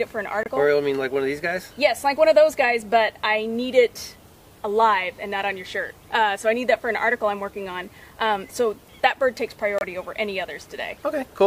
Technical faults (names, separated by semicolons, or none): corrupt frame decoded